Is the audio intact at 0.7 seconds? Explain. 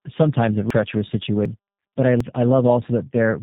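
No. At 0.70 s the sound jumps abruptly, as if around a third of a second has been cut out and the two sides butted together with no gap between them. This is audio missing between chunks: the recording or processing chain likely works in blocks, which fits a 1-second chunk size, and drops a short stretch while closing one block and starting the next, so the material on either side is spliced directly.

The same moment also carries tandem speech coding, which runs through the whole clip. The sound is rough, noisy, muffled and warbly, with nothing above 3.8 kHz. The call passed through G.729A at 8 kbit/s, then G.711 mu-law at 64 kbit/s, then G.729A again. That is two G.729A speech codecs in a row, each re-encoding the already degraded output of the one before, so their model-based artefacts stack up.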